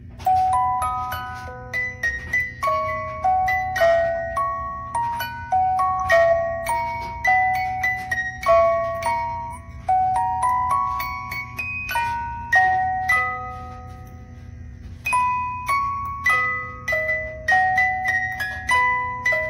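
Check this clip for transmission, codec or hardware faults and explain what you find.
No faults detected.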